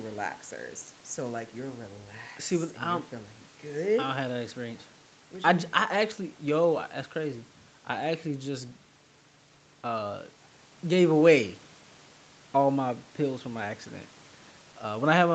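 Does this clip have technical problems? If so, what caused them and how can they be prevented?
No, nothing stood out on listening to this speech clip, so there is nothing here that needs preventing.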